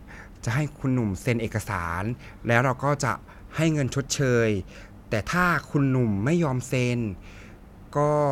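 A speech recording with no audible technical faults anywhere in it.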